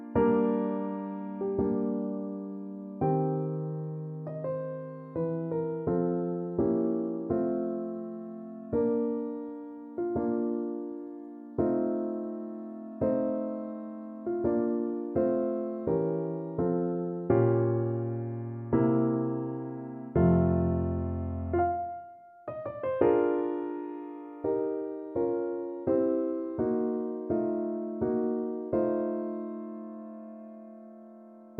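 Nothing in this one trips the ear: no dropouts, glitches, clicks or level jumps turn up anywhere from the first moment to the last.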